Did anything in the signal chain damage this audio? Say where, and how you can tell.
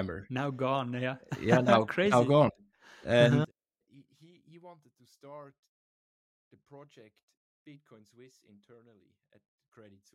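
Yes. From 3.45 s to the end the speech drops by about 27 dB when summed to mono, likely one channel inverted in the analogue wiring, so the matching centre content cancels.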